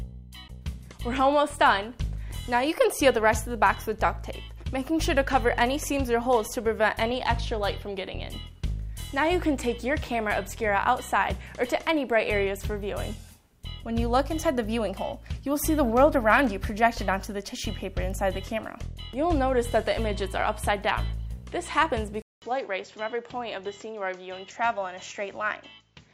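At 22.22 s, after a 200 ms gap, the sound turns duller, slightly quieter and faintly noisier, losing everything above 7.6 kHz to the end, likely an input switched to a poorer device.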